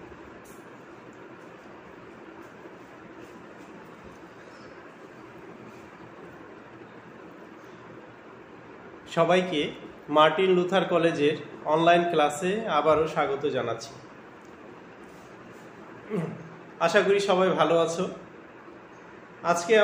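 No technical faults can be heard anywhere in this audio. There is nothing here that calls for a time or a cause to be noted.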